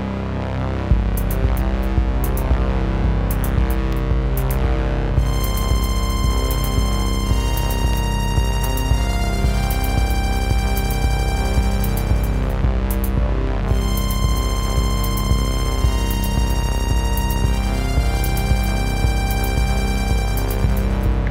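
Regular little ticks run through the audio from about 1.92 s to 19.96 s, one every 2.0 s, about ten in all. These are periodic USB or driver dropouts: something blocks the bus or driver on a fixed schedule, and a tiny sliver of sound, well under a millisecond, drops to silence each time.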